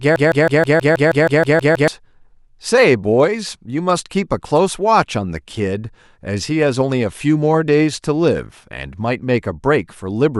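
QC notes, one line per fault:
0.00–1.88 s, broken-record loop: a 0.16 s speech fragment, already repeating when the clip opens, recurs identically 11 times, likely a stalled stream, not echo, since nothing decays.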